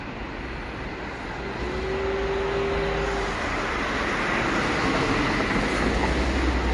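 From start to finish there's a hard ceiling on the treble: nothing gets through above about 11.3 kHz, and the whole clip has that watery, swirly texture with smeared attacks. It's likely MP3 compression working with too few bits, which fits a low rate somewhere near 44 kbps. When the encoder runs short, it chops the top end at a fixed point and drops the weaker frequency lines, and those lines flicker on and off from frame to frame.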